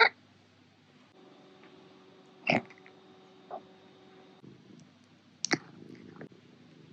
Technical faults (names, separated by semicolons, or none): none